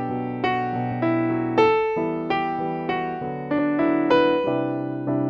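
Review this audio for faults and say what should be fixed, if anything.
A brief, sharp blip cuts through the sound at 3.58 s, lasting only about 14 ms. This is damaged data in a compressed stream: a small stretch of the encoded bytes was corrupted, so the decoder could not read the frame at that point. It lost synchronisation, produced a garbled fragment of output, and then picked up cleanly again at the next valid frame header. To prevent it, transfer and store the file with checksums or error-protected delivery, and re-fetch the stream from the source if verification fails.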